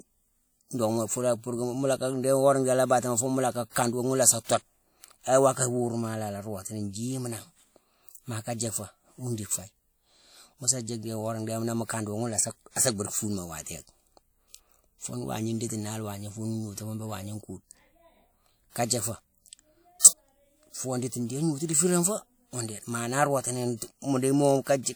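A short smear of hiss arrives just ahead of two sharp attacks in the speech, first from 4.44 to 4.49 s and again from 18.85 to 18.90 s, each spreading about 50 ms before the onset and softening its edge. This is pre-echo: the codec's quantisation noise is spread across a whole transform block. The noise, scaled to the loud attack near the block's end, leaks into the quiet stretch just before it.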